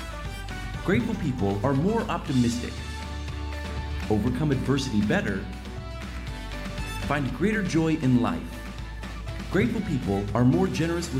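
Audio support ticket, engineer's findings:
Findings: no audio fault found in this clip.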